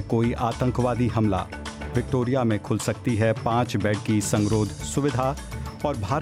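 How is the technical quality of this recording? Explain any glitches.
Nothing here needs explaining, since the recording runs along without any glitch to point to.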